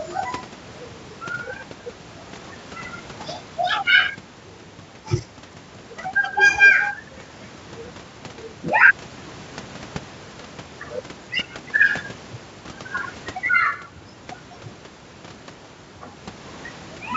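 A speech recording with nothing technically wrong with it.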